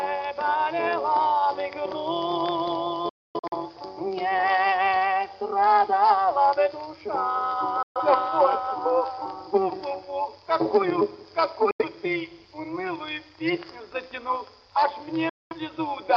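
Right from the start and all the way through there's overlap-add ripple. The frames were rejoined with an overlap that doesn't sum flat, so the level pumps by about 6 dB at around 200 Hz. That gives the whole clip a metallic buzz.

Then there's digital broadcast dropout, where the receiver mutes on bad frames with a near-instant 3 ms fade. From 3.09 to 3.56 s it breaks into several holes, the longest 256 ms. Shorter dropouts follow at 7.83 to 8.01 s, 11.71 to 11.85 s and 15.29 to 15.56 s.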